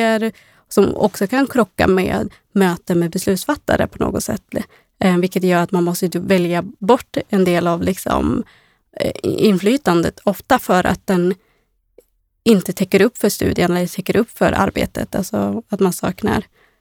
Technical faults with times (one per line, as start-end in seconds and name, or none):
none